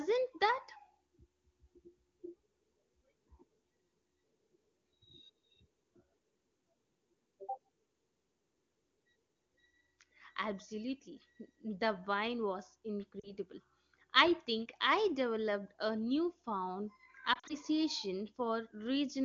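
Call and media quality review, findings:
Lost AMR speech frames: brief dip toward near silence at 13.19–13.32 s (about 40 ms concealed), then repeated brief dips at 17.33–17.55 s (80 ms lost, scattered over 160 ms, runs up to 40 ms). Failed frames were rebuilt from the last good pitch and vocal tract parameters with decaying gain.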